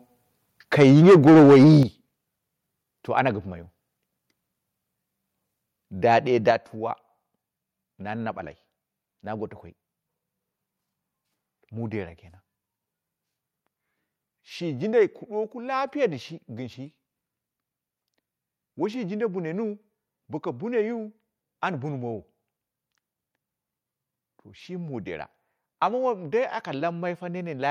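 Microphone overload, likely from an input volume set too high, pushes peaks about 11 dB past the converter's limit from 0.8 to 1.78 s, clipping roughly a fifth of samples into a harsh crackle. The microphone volume stepped down, likely from automatic gain control, at 0.83 s (about 2 dB), 1.83 s (about 8 dB) and 6.51 s (about 5 dB), each a sudden level drop.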